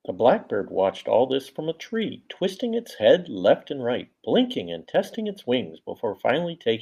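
A speech clip with clock slip clicks from 0.14 s to 6.77 s. Faint ticks recur about every 50 ms, roughly twenty a second, so they blur into a soft rattle. There are around a hundred in all. They stand out on louder, sustained sounds and vanish in pauses. The likely cause is two unsynchronised device clocks drifting apart by roughly 400 parts per million. Each time the gap reaches a whole sample, one sample is dropped or repeated.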